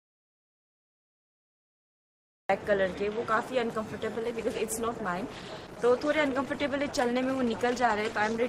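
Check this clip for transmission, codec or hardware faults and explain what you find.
Two faults are present: an audio dropout to silence at the start, and a drop to a lower bitrate in the adaptive stream for the second half.

From the first moment to 2.49 s the clip is an audio dropout to silence that is already under way when the recording begins. The signal is silent, with no room tone or noise floor at all, so nothing from the source reaches the file. The likely cause is a lost input, such as a disconnected device, a failed link or an accidental mute, while the recorder kept writing blank samples.

At 4.15 s the adaptive stream switches to a lower bitrate and stays there until the end. The change is abrupt and leaves no gap. Codec artefacts are stronger than in the preceding stretch. This points to a player stepping down from an Opus stream at around 64 kbit/s to one near 16 kbit/s after the connection slowed.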